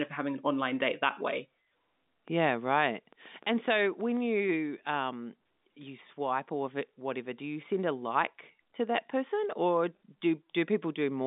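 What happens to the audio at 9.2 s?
At 9.2 s the speech continues intact, with no dropout, click or distortion, just the narrow telephone-band sound of G.711 coding with nothing above about 3.8 kHz.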